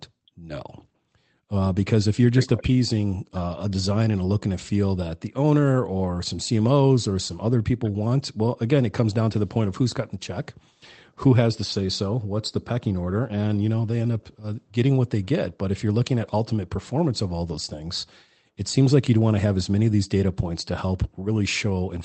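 No technical faults occur at any point in this speech clip, which comes through a normal call path.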